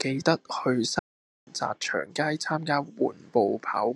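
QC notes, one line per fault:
0.99–1.47 s, playback stall: the speech cuts off mid-flow and the output falls silent for about 0.48 s before carrying on. This is likely the player running short of data or its output thread being held up, so nothing reached the output until it recovered. On a waveform it shows as a flat, silent gap with abrupt edges. A spectrogram shows a clean vertical blank band across all frequencies, with the speech energy resuming sharply at 1.47 s.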